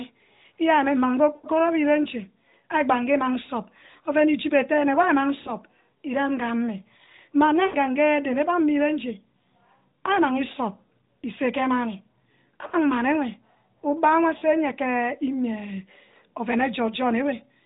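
Lost AMR speech frames interrupt the speech at 1.36 to 1.47 s, 5.40 to 5.53 s, 7.66 to 7.76 s, 12.68 to 12.74 s and 14.38 to 14.42 s, gaps of 80, 60, 80, 40 and 40 ms. In each, corrupted frames were discarded, and the decoder kept repeating the last good pitch and vocal tract shape while lowering the gain. The result is a short smeared, warbling stretch that sags in level. On a spectrogram, below the 4 kHz ceiling of the narrowband codec, the harmonics run flat and steadily fade. The waveform envelope tapers there before the speech recovers.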